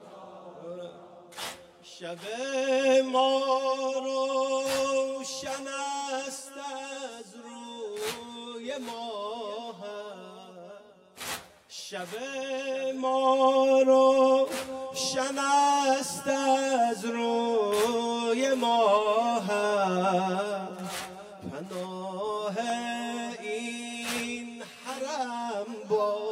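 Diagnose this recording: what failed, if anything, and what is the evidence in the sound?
Channel delay with comb filtering, throughout, at the driver or buffer stage. One channel trails the other by roughly 10 ms, and the mono sum cancels at regularly spaced frequencies, the first notch around 40 Hz. The result is a steady hollow, phasey coloration.

A block of digital silence at 22.7 s, also at the driver or buffer stage. The output drops to zero for 0.27 ms and returns without any fade, so the hard edges produce a single sharp tick, consistent with a buffer left unfilled in time.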